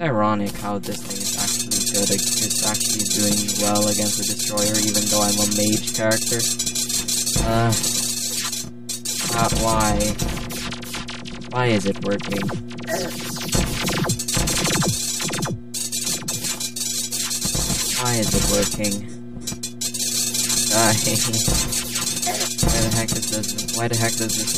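Channel delay (comb filtering) runs throughout. One channel arrives around 5 ms late, and when the two are summed to mono, shared content cancels at fixed, evenly spaced notches starting near 100 Hz and recurring every 200 Hz. The result sounds hollow and phasey from start to finish.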